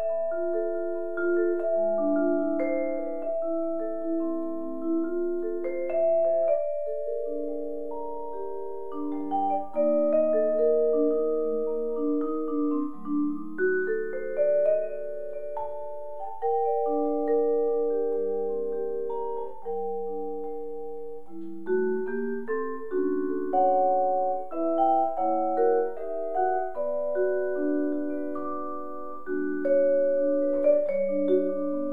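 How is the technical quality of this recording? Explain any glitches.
No glitches or faults heard.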